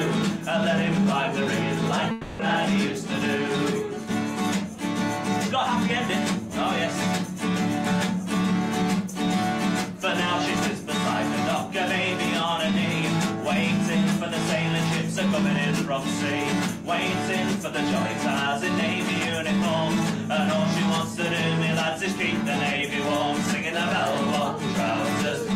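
From 2.11 to 2.41 s the sound smears into a fading buzz that carries over the last moment before it, then resumes with about 280 ms simply gone. This is likely a long network dropout, where the receiver papered over audio that never arrived.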